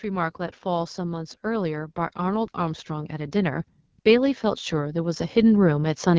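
From the start, the speech carries the AMR wideband (HD Voice) codec at a plainly damaged setting. Its rough, raspy texture points to one of the lowest rates, around 8.85 kbit/s. This is grittiness from a coarse pulse-coded vocal tract model, not the hiss or warble of broadband noise or dropouts. The band above 6.4 kHz sounds like shaped noise rather than detail.

From 0.05 to 6.05 s, automatic gain is rising. The control judged the input too quiet and lifted its gain by about 11 dB over the whole six seconds. Voice and background swell together, which separates it from a speaker simply getting louder.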